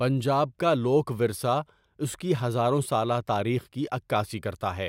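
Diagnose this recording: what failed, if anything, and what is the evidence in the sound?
Nothing in the signal chain has failed, and the speech reaches the listener intact at every stage from capture to playback.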